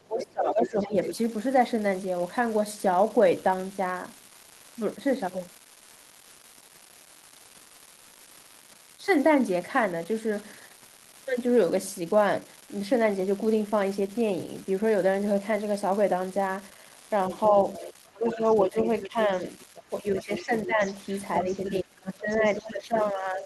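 Throughout the speech runs an unreliable data bit: a marginal data line flips one bit at random, giving equal-sized spikes heard as constant crackle, visible as scattered vertical needles even in pauses. From 0.03 to 0.96 s the talker dips by up to about 20 dB, likely speech suppressed in double talk, showing as a hollowed waveform envelope. Overlapping it, from 0.2 to 1.15 s, a second voice sits about 10 dB under the talker, likely the other side's voice leaking through past the echo canceller, seen as a separate faint harmonic pattern. It returns from 17.29 to 22.7 s at about 15 dB down, while the talker is again pushed down at 17.49 to 19.31 s (about 15 dB), 19.89 to 20.83 s (about 10 dB) and 21.41 s to the end (about 20 dB), each appearing as a dip in the talker's trace.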